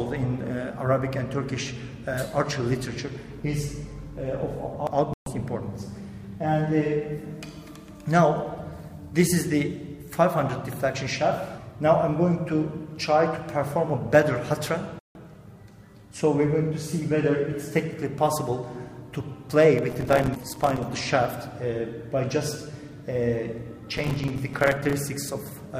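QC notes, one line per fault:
5.14–5.27 s and 14.99–15.16 s, digital broadcast dropout: the sound mutes abruptly for 130 ms and then 160 ms. The receiver likely lost or rejected a few frames and stayed silent until good ones returned.
19.90–20.83 s and 23.97–24.99 s, processor overload crackle: roughly a second of gritty crackle each time, from dozens of missed buffers of a few milliseconds, each leaving a hard-edged silent gap.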